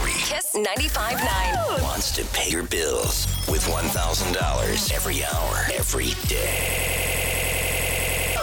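At 2.47 to 2.53 s there is damaged data in a compressed stream. Part of the coded data was corrupted. The decoder misread those frames, lost sync and hunted for the next valid header. It is heard as a brief glitch.

From 6.60 to 8.36 s comes a system hang loop. The system froze while the sound hardware kept replaying one 92.9 ms piece of audio, which fits a 4096-sample buffer. It repeats at 10.8 Hz as a machine-gun stutter. About two seconds of audio are lost.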